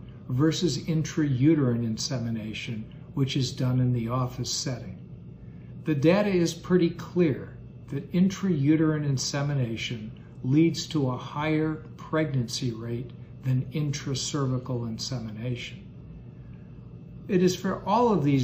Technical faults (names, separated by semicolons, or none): none